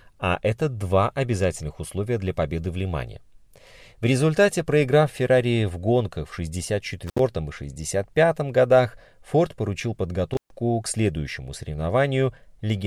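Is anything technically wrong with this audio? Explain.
Yes. This speech has an intermittent contact fault, twice: at 7.07 s, opening for about 65 ms, and at 10.32 s, about 131 ms, just before "к следующему". A loose connection briefly breaks, so the sound drops out with crackle at the edges. The waveform shows a near-flat gap bracketed by spikes, and the spectrogram shows vertical broadband clicks around a faint noise floor.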